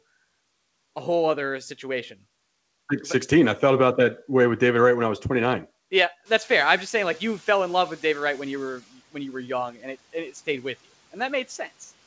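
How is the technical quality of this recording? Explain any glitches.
The background noise jumps suddenly at around six and a half seconds and briefly comes through too loud before settling. The audio also has nothing above 8 kHz, which points to a wideband call codec such as G.722 at 64 kbps.

From 6.25 to 8.8 s, just before "when you were young", the noise suppressor is catching up. The room noise rises by about 16 dB and the suppressor's noise estimate lags, so the louder noise passes through at first. It then sinks by about 8 dB over 2.55 s as the estimate adapts.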